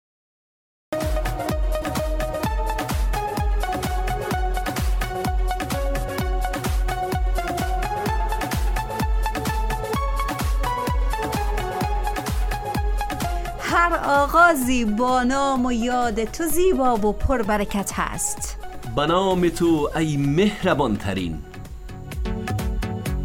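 There's a cut-off start here: the audio sits in dead digital silence until about 0.93 s, then drops straight into the middle of a sound with no attack or fade-in. The recording or stream clearly began late and caught that sound already underway.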